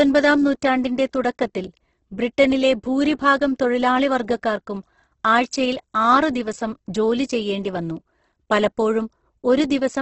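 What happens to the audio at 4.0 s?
At 4.0 s the speech has the same rough, grainy texture heard throughout, with nothing above 8.2 kHz. This is likely heavy Opus compression near 12 kbps, in music mode. Starved bands are filled with folded or noise content instead of left empty, so the speech sounds gritty rather than MP3-like swirl.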